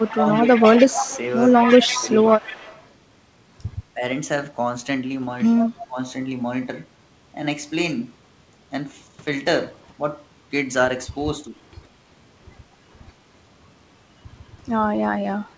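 From the start to 2.87 s, a faint delayed copy of the speech trails the talker by about 148 ms. It sits roughly 10 dB below the direct sound. This is an echo leak. The likely cause is a far-end loudspeaker feeding its microphone, with the echo canceller letting part of that pickup return down the line.

Overlapping this, the speech is suppressed in double talk at 0.09 to 0.8 s and 1.58 to 2.45 s, dipping around 10 dB each time. The same happens briefly at 3.94 to 4.03 s. The deepest cut comes at 5.62 to 6.0 s, near 25 dB, almost a dropout. Two light dips of about 5 dB follow, at 11.44 to 11.56 s and around 14.6 s. The likely cause is an echo canceller that could not tell the talker from the returning echo and pulled both down together.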